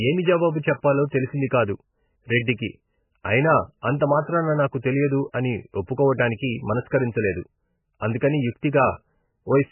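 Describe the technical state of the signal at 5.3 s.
Pre-echo sits at 5.32 s, right after "ఐనా అంతమాత్రాన నాకు తెలియదు". A transform codec spreads its quantisation noise across a whole block, and here a sharp attack lands late in one, so noise scaled to the loud onset leaks into the quiet moment before it. The result is a short hiss smeared about 15 ms ahead of the attack, which loses its crispness and sounds softened.

The same moment carries heavy MP3 compression damage, present through the whole clip and the likely cause of the treble loss. Nothing is heard above 3 kHz, because the starved encoder cuts the top band at a fixed point and zeroes weaker frequency lines, which flicker in and out between frames. The speech therefore sounds dull, watery and swirly, with smeared attacks, which fits a bitrate of roughly 10 kbps.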